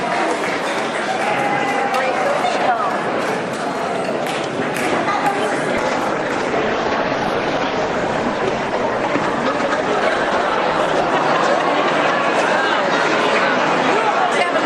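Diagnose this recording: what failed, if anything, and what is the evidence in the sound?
A call bitrate drop at the network and codec stage: the bandwidth estimate collapsed and the encoder was told to fall from 96 kbps to about 17 kbps. From 5.82 s the sound turns coarse and muffled, with the top end trimmed away and a rough, watery texture. It stays at that lowest rate for about 5.3 s before clarity returns at 11.24 s, once the estimate recovers and the encoder is allowed more bits again.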